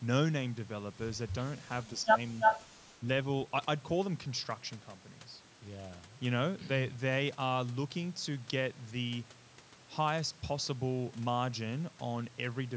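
From 2.03 to 2.17 s the speech dips by about 15 dB, likely speech suppressed in double talk, where the echo canceller ducks everything while both sides talk. From 2.4 to 2.65 s a copy of the voice returns 333 ms late at roughly the same level, likely an echo leak from a speakerphone canceller letting pickup through. At about 2.96 to 3.01 s there's a shorter, shallower dip of about 5 dB, likely the same double-talk suppression again.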